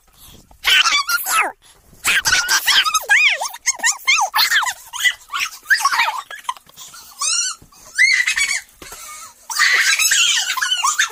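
Throughout, audio read two samples at a time: sample pairs taken as single frames double the speed and raise pitch an octave.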